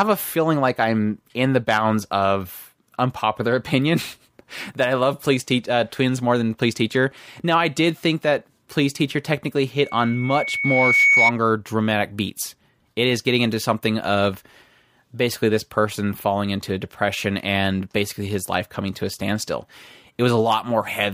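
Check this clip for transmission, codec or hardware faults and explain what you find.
There's one clear fault here: a loudspeaker feedback squeal from 9.82 s to 11.32 s. A mic is picking up the speaker it feeds, and at about 2.2 kHz the loop gain tips past one, so that tone feeds on itself. You hear a single whistle rising out of the speech over roughly a second, ending up a few dB louder than the talker, before it drops away.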